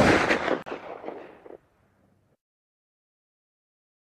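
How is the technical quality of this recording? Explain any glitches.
The recording has one glitch: at 0.62 s the sound cuts to complete silence for about 40 ms, ending at 0.66 s, then resumes. That abrupt hole followed by a clean pickup is the signature of a Bluetooth stall. The likely cause is radio interference delaying packets on the wireless link, so the receiving buffer ran empty and playback halted briefly until the retransmitted audio arrived and filled it again.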